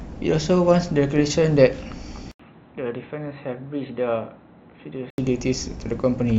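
At 2.31 s the speech drops out for 80 ms. It returns dull and boxy, with nothing above 4.1 kHz. It is about 10 dB quieter, over faint new background noise. At 5.18 s it clears. The likely cause is an input switched to a poorer device.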